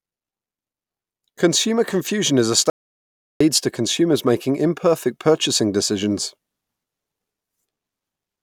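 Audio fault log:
2.70–3.40 s, audio dropout to silence: right after "confusion is a" the speech cuts to dead silence for about 0.7 s, no room tone, resuming at "to consumers making imperfect". Likely a lost input link with silence written. Waveform shows a flat line; spectrogram a fully blank band.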